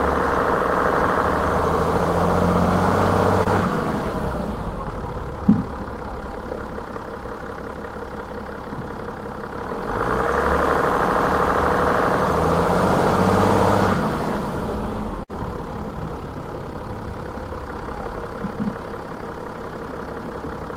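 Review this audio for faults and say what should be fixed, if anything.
At 3.43 to 3.47 s there is a short concealed packet loss. About 20 ms of audio never arrived in time, and the receiver covered the hole with roughly 21 ms of synthesised continuation, extending the preceding sound from its last pitch or as shaped noise, then crossfading back into the real signal. The result is a brief smear or wobble lasting a few hundredths of a second.

At 15.23 to 15.31 s there is a burst of packet loss. Roughly 60 ms went missing in one run, longer than the first gap, so the concealer had to extend the last received sound for about 57 ms while progressively attenuating it. This is heard as a held buzz or fading hiss in place of the real material, after which the audio picks up further along with that stretch gone.

To prevent both faults, carry the stream over a more reliable path or enable forward error correction and a slightly deeper jitter buffer so late or lost packets can be recovered instead of concealed.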